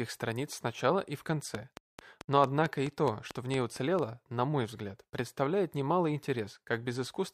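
From 1.55 to 4.00 s a train of clicks, about ten similar pulses at a steady 4.5 per second, ticks over the sound, likely from nearby equipment interference. Its even pacing sets it apart from random crackle.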